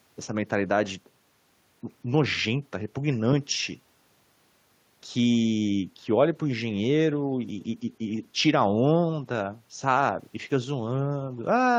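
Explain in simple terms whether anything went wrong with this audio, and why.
Nothing stood out on listening to this speech recording, so there is no problem to point to.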